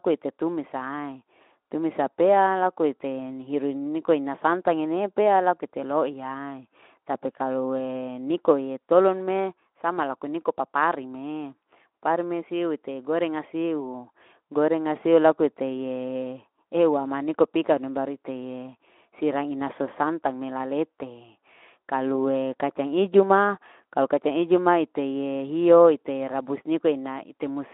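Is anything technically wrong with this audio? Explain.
No, nothing is wrong: the speech comes over a Speex-coded telephone-band path, with the 250 Hz to 3.4 kHz line limit and the light coding texture that fits a setting of about 15 kbps.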